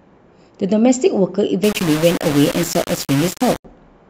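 From 1.64 to 3.65 s, the speech was likely requantized to 4 bits by plain rounding with no dither, a case of low bit depth without dither. The rounding error tracks the signal, so the voice turns harsh and gritty, with distortion only about 10 dB below it.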